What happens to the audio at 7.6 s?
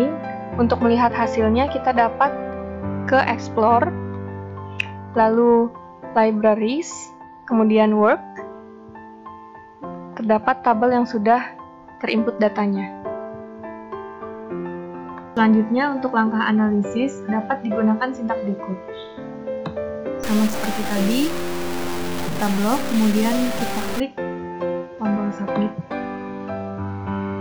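Nothing goes wrong at 7.6 s; the audio plays through that moment intact, with no dropout, click or other fault.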